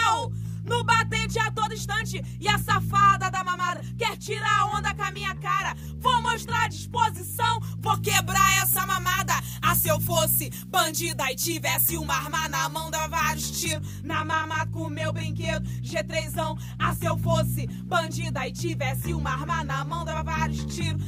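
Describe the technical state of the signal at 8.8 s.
At 8.8 s the sound is thin, over-bright and hissy, with sibilant edges that jump forward. This is pre-emphasis left on, running from 7.94 to 13.73 s. The treble boost of a 75 µs FM pre-emphasis curve, about 14 dB at 10 kHz relative to 1 kHz, remains in the signal because the matching de-emphasis cut was never applied to bring the upper range back down.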